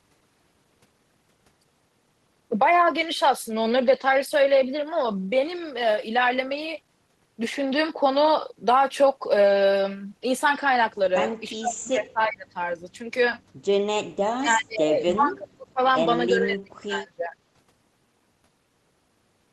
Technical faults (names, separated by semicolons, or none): speech suppressed in double talk